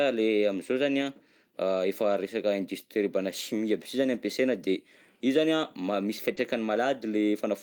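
At 1.01 s and 4.13 s there is a lost packet rebuilt from error correction. In each case about 20 ms, which fits a single lost packet, was replaced by the low-bitrate copy carried in the next packet. Nothing is missing, but that stretch turns briefly rougher and noisier.

From 6.35 to 6.39 s comes a short concealed packet loss. Unlike the rebuilt packets, the decoder had no copy here. It extended the preceding sound and then blended back, giving a brief smear or wobble rather than mere roughness. At 6.37 s, inside that span, another packet was rebuilt from error correction. The concealed stretch cross-fades into this rougher low-bitrate material.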